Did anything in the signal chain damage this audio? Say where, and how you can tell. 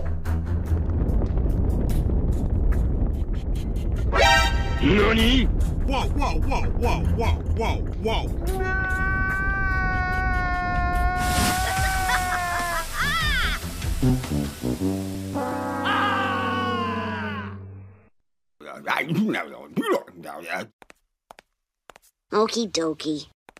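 No, the signal chain shows no audible damage at any stage.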